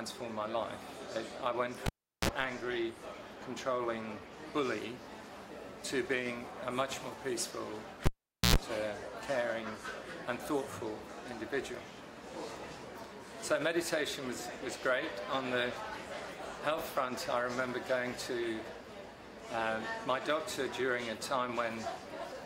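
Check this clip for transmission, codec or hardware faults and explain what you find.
Two hardware faults of one kind. Cable pulled and plugged in, 1.86–2.29 s and 8.05–8.56 s: a live lead breaks contact, so a pop, near silence, a brief 60 Hz buzz, then another pop.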